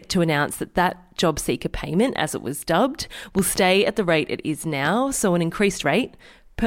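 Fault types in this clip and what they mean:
Loud pop: A sudden electrical pulse, likely from a plug, a switch, a static discharge or a driver glitch, entered the signal path, and the circuits after it turned it into a brief burst. In this speech it is heard as sharp pops roughly 10 dB above the voice. A double pop runs from 3.39 to 3.59 s after "as it was dubbed". A single pop comes at 4.85–4.89 s after "the rate it is". The speech continues underneath both.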